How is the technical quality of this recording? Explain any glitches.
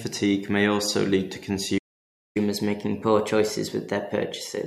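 The recording has two linked glitches: a playback stall and then a catch-up at higher speed, running from 1.78 s to the end of the speech.

From 1.78 to 2.37 s the sound cuts out for about 574 ms, most likely because the player ran short of data or its thread was blocked. Unlike a dropout or packet loss, this is one long clean silence mid-flow.

From 2.37 s to the end, the player works off its backlog by resampling at 1.1 times normal speed. Tempo and pitch rise together, by about a semitone and a half, so the speech sounds slightly hurried and higher. A time-stretch would keep the pitch unchanged.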